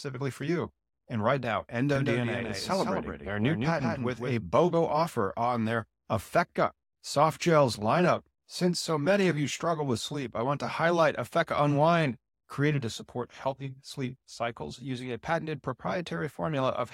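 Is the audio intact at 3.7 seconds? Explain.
No. From 1.95 to 4.33 s a doubled audio track is heard: the speech is repeated roughly 150 ms late, about 5 dB quieter, likely from a second capture path. It sounds like a dry slapback, and a spectrogram shows each syllable's full-band pattern echoed slightly later.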